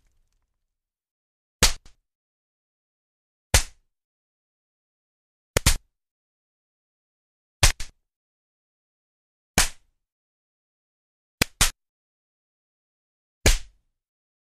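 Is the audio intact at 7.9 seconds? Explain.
No. From 7.71 to 7.90 s, chunks are out of order: a 93 ms chunk arrives one chunk late and plays after its successor, so the sound briefly jumbles. The waveform shows three abrupt steps, and the spectrogram shows thin vertical broadband lines at each join.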